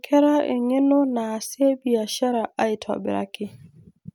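No technical faults can be heard anywhere in the recording.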